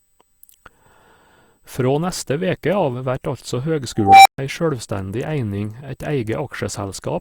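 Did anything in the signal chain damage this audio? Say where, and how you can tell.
Yes. A USB whine runs through the whole speech clip: a fixed tone at 8 kHz, strongest at its 16 kHz harmonic, about 45 dB below the signal. It enters through power or ground in the analogue wiring, from 125-microsecond microframes. Mains hum would sit at 50 or 60 Hz instead.

An unstable filter breaks out in call processing right after "veke av vert altså". From 3.97 s a tone around 700 Hz swells for 283 ms to clipping, then the output drops out for 131 ms until 4.38 s. Acoustic feedback would not end in sudden silence.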